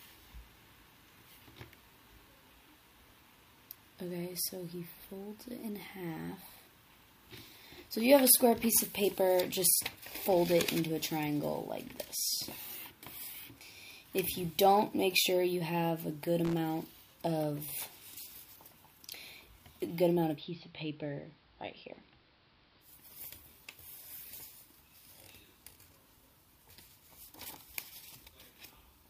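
Loose connector crackle from 16.45 to 16.58 s: a worn contact chatters open and shut, chopping the sound into a short, irregular scratchy burst.

Digital radio blending to analogue from 20.33 to 22.93 s: the receiver loses digital reception and cross-fades over 134 ms to AM, so treble dulls, level drops about 4 dB, and hiss rises.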